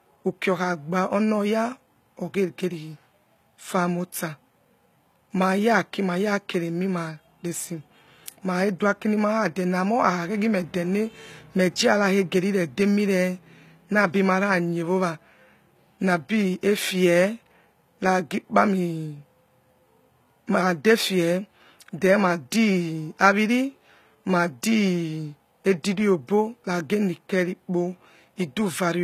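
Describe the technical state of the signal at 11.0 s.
At 11.0 s the speech carries audible coding damage that runs through the whole clip. Sibilants sound gritty and metallic, and nothing reaches above 14.9 kHz. This is likely HE-AAC compression at a low bitrate, around 20 kbps, rebuilding the treble from copied lower bands.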